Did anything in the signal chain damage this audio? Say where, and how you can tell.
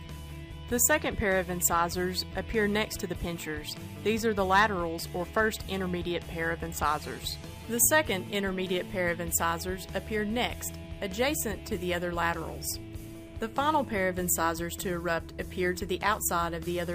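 No, nothing along the chain seems to have hurt this one, and I can't hear anything worth pointing to at any stage.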